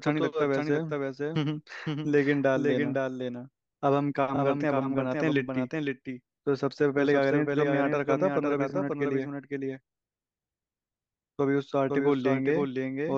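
A doubled audio track runs through the whole of this speech clip. A second, full-band copy of the same speech trails the original by about half a second, at a level about 5 dB lower. It has no reverberant tail or room colouring, so it sounds like a clean, detached repeat rather than an echo. The likely cause is the signal being captured twice, once through a slower path, or an edit leaving two copies out of alignment. Repeated frames occur at 4.35–4.38 s and again at 8.69–8.71 s. In each spot a 26.1 ms block of audio plays one extra time, heard as a short stutter. The block length fits a single compressed frame that was written or sent twice, and each repeat adds 26.1 ms to the running time.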